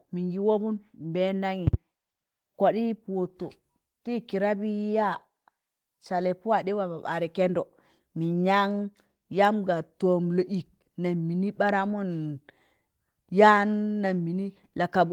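At 1.67 s a loud pop breaks into the speech, a double one, ending by 1.76 s. The pops peak roughly 15 dB above the voice. The likely cause is a sudden voltage pulse, as from a plug, switch or static. The speech continues underneath.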